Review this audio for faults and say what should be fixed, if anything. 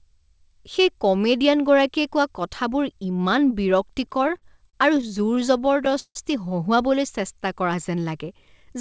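Repeated stalls (stutter) run from 4.06 to 6.17 s. The audio halts nineteen times, the longest hold lasting 155 ms. Each time the receiver's jitter buffer ran dry, it extended the last sound, fading it on the longer holds. About 388 ms is filled this way, roughly a fifth of that stretch. Unlike packet loss, nothing is skipped: every stall resumes exactly where it left off, so the sound drags rather than jumping. A deeper or faster-adapting jitter buffer, and a steadier network path, would prevent it.

A jitter buffer slow-down follows from 7.22 to 7.76 s. To rebuild its reserve, the receiver repeated single pitch periods in a row. This adds 48 ms and plays that span at about 92% speed. It differs from a tape-style slow-down because the pitch stays unchanged: sounds are stretched, not lowered. It also differs from the stutter, because the motion stays continuous with no hard halts. Keeping the buffer from running low in the first place, by giving it more headroom after the stall episode, would avoid it. 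Through both, the band stops at 8 kHz, which fits G.722 at 64 kbps.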